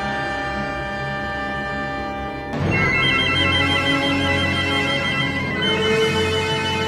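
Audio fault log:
No faults detected; signal path nominal.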